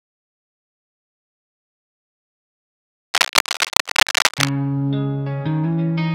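From 3.14 to 4.49 s there's a burst of cable scratch noise, dense, ragged crackle riding a bit louder than the sound itself. It's likely a worn cable or connector being moved, its contact resistance jumping around and scratching over everything for that stretch.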